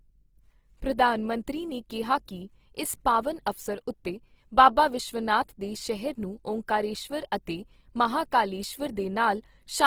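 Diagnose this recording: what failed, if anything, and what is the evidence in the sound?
Opus compression throughout the speech, a codec-stage fault. The damage is plainly audible: the voice sounds rough and grainy, with a noisy texture where clean harmonics should be. The spectrum still reaches about 20.4 kHz, so the bandwidth hasn't narrowed. The cause is likely Opus in its music (CELT) mode at a bitrate around 16 kbps. It keeps each band's energy but fills short-changed bands with folded or noise content, turning tone into grit.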